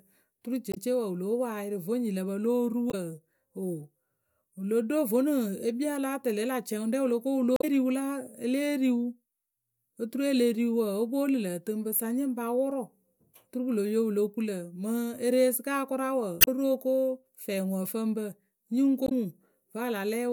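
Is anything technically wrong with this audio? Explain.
Yes. Five brief glitches break into the speech, at 0.69, 2.87, 7.55 (just after "wǝ lo ko wǝ"), 16.38 and 19.05 seconds, each lasting about 70 to 110 ms. These come from damaged data in a compressed stream: corrupted bytes made the decoder misread or discard frames, lose sync and hunt for the next valid frame header, so each spot sounds like a chirp, squawk, click or short hole rather than clean sound.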